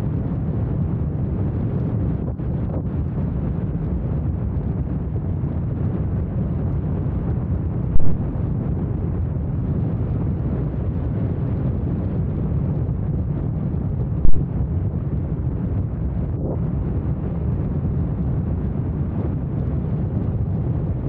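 Two phantom power thumps break into the sound. The first starts at 7.96 s and runs to 8.20 s. It is a deep low-frequency blow peaking at about -3 dBFS, and it dies away over roughly 55 ms. The second arrives at 14.25 s and ends by 14.36 s. It hits the same peak of about -3 dBFS but decays faster, in about 25 ms. Each comes from a supply being switched on a live input. The voltage step rides through the coupling capacitors straight into the signal path.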